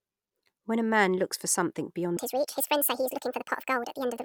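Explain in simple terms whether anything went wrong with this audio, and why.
Something went wrong at 2.17 s, right after "man looks for something". From there to the end at 4.25 s, the speech plays about 1.56 times too fast. Voices sound hurried and jump up in pitch, roughly seven semitones. This is a section at the wrong speed, likely from a player or editor using the wrong clock.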